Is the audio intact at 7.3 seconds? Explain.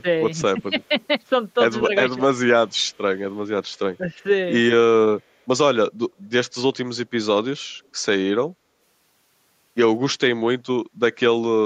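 Yes, the speech at 7.3 seconds plays through intact, with no audible fault at that moment.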